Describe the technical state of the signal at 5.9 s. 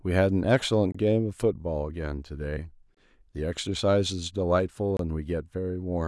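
Around 5.9 s the speech signal is intact, with no audible technical fault at that moment.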